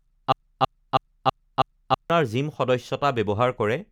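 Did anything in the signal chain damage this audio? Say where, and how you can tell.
Yes. From 0.32 s to 2.10 s the speech falls into a broken-record loop: a 0.32 s fragment plays five times back to back, each repeat identical, and the speech that belonged in that span never arrives. Exact repetition at a fixed 324 ms period points to the buffer or stream stage, most likely a stalled player or stream that kept re-sending the last block it held until new data resumed.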